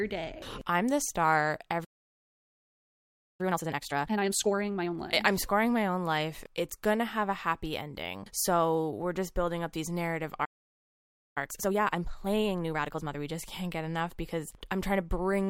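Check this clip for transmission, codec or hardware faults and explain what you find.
The clip has two playback faults, each happening twice: a stall followed by a hurried catch-up.

Playback stall at 1.84–3.41 s (about 1.5 s) and 10.45–11.38 s (about 0.9 s): the speech stops dead, likely because the player ran short of data.

Time-compressed catch-up at 3.41–4.95 s (2x speed) and 11.38–13.20 s (1.5x): the player trims its backlog with small cross-faded cuts, so speech rushes at normal pitch, unlike a chipmunk-like speed-up.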